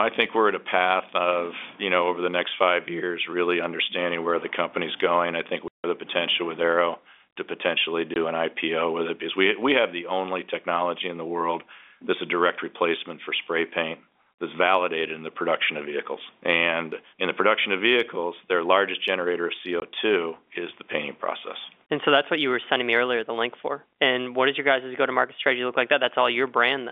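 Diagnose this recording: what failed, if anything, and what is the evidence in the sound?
The network stage failed, with packet loss filled with silence. The speech drops to dead silence at 5.68 to 5.84 s (160 ms) and for 20 ms at 8.14 and 19.8 s, each gap with hard edges. The lengths are multiples of 20 ms, which fits lost 20 ms packets. A concealing receiver would smear or repeat sound, so the abrupt digital silence points to no concealment. The 300 to 3500 Hz G.711 telephone band carries through unchanged.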